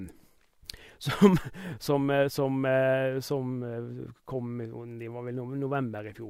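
Nothing technically wrong turns up anywhere in this short bit of speech; it's just a recording with no faults to point to.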